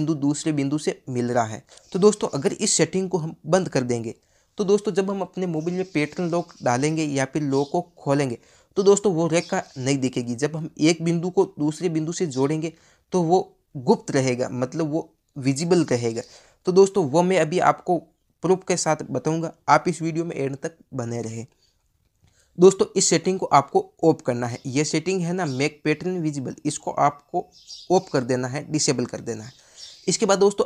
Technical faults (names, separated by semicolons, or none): damaged data in a compressed stream